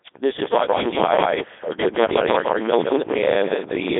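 From the very start the speech has that synthetic, buzzy, robotic quality of the Codec 2 vocoder. It's not passing the actual waveform. It sends just pitch, voicing, energy and a rough spectral shape, and the decoder rebuilds the voice from sine waves. The damage is heavy. The band sits roughly between 300 Hz and 3.6 kHz, with nothing at all above 3.8 kHz. The texture fits its highest-rate mode, around 3.2 kbit/s.

At 0.32 s a second problem kicks in and runs to the end: buffer tearing. The writer and the hardware reader of the output ring buffer have drifted, so they cross mid-period. A good chunk of each buffer, something like two-fifths, is stale audio from roughly 150 ms back, spliced in with hard edges. You hear it as a steady rattle at 25 Hz, which points to a buffer of about 40 ms, riding on top of the speech.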